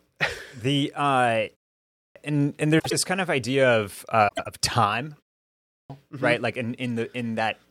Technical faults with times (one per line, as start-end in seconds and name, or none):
1.78-2.16 clipped start after a pause
2.79-2.93 frames out of order
4.28-4.47 frames out of order
5.51-5.90 clipped start after a pause